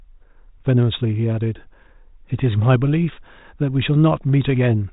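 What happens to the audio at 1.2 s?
Nothing goes wrong at 1.2 s: the speech there comes through intact, carried by telephone-band G.726 ADPCM coding that leaves nothing above about 3.8 kHz.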